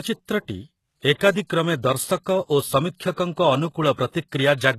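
A short speech recording that has the HE-AAC compression sound from start to finish, and pretty heavy damage at that. The top end is there but synthetic: nothing above about 12.3 kHz, and the treble that is present sounds copied up from lower down, so the s sounds come out gritty and lispy. That's the likely cause: band replication filling in the highs, and the heavy damage fits a very low bitrate around 16 kbps.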